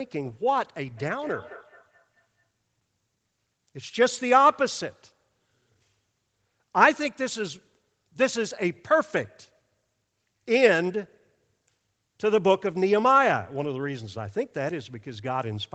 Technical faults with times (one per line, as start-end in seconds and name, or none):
0.95-2.49 feedback echo between two devices